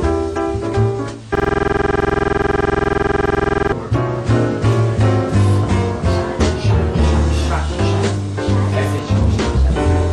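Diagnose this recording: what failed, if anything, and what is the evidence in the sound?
The driver or buffer stage failed with a system hang loop from 1.35 to 3.72 s. A 46.44 ms slice of sound repeats about 50 times at 21.5 Hz, giving a rattling buzz. The host stalled while the hardware kept replaying one buffer, which fits a 2048-sample ring buffer.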